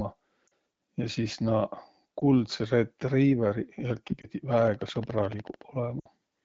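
At 0.47 s, lost AMR speech frames cause a brief warble. About 40 ms is concealed, which fits two dropped frames. The decoder repeats the last good settings at falling gain. Single-frame dips follow at 2.19–2.24 s and 4.21–4.26 s.

From 4.53 to 5.62 s comes a train of clicks. About fifteen similar pops tick at a regular 13.8 per second. They peak roughly 5 dB above the speech. Interference from nearby equipment or a faulty connection or power supply is the likely cause.

At 6.00–6.07 s, a 60 ms gap shows a longer run of lost frames. The sound drops to near silence before recovering weakly, over light AMR wideband coding.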